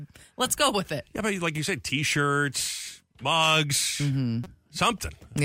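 At 1.36 s and again at 2.88 s the speech has a repeated buffer: new audio missed its deadline, so the device replayed the previous block of about 5.3 ms, which fits a 256-sample buffer. Each of these is heard as a single click. At 4.44 to 4.46 s the same block plays four extra times, producing a brief buzz, with about 20 ms of speech lost behind it.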